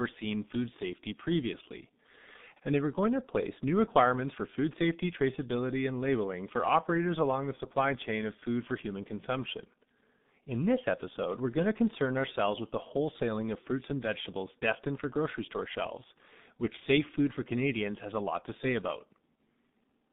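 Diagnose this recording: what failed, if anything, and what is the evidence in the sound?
Throughout, speech sounds muffled and hoarse with smeared consonants, confined to 150 Hz to 3.7 kHz. This points to the codec stage: G.723.1, with coarse 30 ms frames that fit 6.3 kbit/s.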